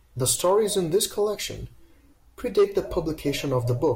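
Compressed frames skipped at 1.35 to 1.38 s, right after "stories in this": the decoder drops a couple of 20 ms frames, so the speech jumps ahead by roughly 40 ms.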